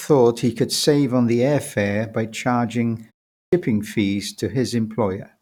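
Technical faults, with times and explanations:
3.33 to 3.53 s, clipped start after a pause: right after "air fare by charging" there's a short gap of about 0.3 s, and when the sound comes back its first 196 ms are simply gone, so the next word jumps in abruptly with its opening cut off. The output path went idle during that brief silence and hadn't woken or relocked in time, so the beginning of the returning sound was swallowed before the device was ready to play it.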